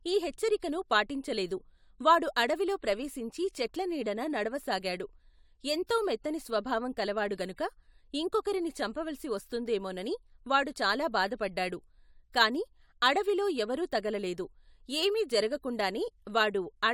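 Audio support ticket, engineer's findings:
Listened in full: no faults detected in speech recording.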